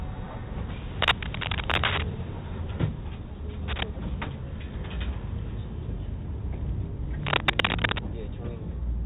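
Throughout, heavy 4-bit ADPCM compression adds a gritty hiss that rides on every loud sound. With nothing above 3.8 kHz, the dull band fits a roughly 32 kbps, low-rate coder rather than plain lowpass filtering.

From 1.02 to 2.03 s, at 3.68 to 3.83 s, and from 7.23 to 8.02 s, dense, uneven rustling bursts sit about 5 dB above the sound. This is cable scratch noise, likely from a worn connector being moved. Unlike the codec hiss, it comes and goes in patches instead of following the signal's level.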